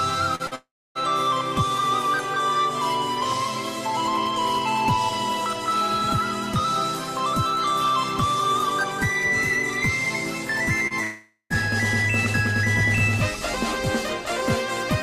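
Brief smears at 0.35 to 0.42 s and 0.47 to 0.54 s are short concealed packet loss: about 40 ms went missing each time and was bridged by extending the preceding sound. From 0.55 to 0.98 s, a fading continuation gives way to roughly 0.28 s of silence before the audio resumes with material skipped. A likely long network dropout caused this. A further 33 ms smear occurs at 10.87 to 10.93 s. From 11.02 to 11.53 s, a second likely dropout follows the same pattern, with a fading fill and about 0.11 s of silence.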